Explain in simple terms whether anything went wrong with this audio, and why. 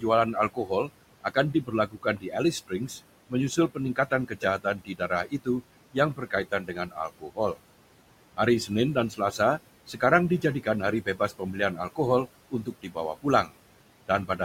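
Throughout the recording, the background noise keeps dipping away between phrases and creeping back up underneath them. These are noise suppressor artifacts. A cleanup filter keeps judging, moment by moment, which parts of the sound are steady noise and pushing those parts down. Each time it changes its mind, the leftover noise and the voice shift along with it.

In two stretches, from the start to 7.56 s and from 8.37 to 13.54 s, bits of the talking itself go faint or sound swallowed. Soft sounds and the tails of words drop away. All told it comes to about two seconds in the first stretch and about one second in the second. This is speech cut by the noise suppressor. The filter mistook those quieter pieces of speech for background noise and turned them down together with the room noise it was meant to remove.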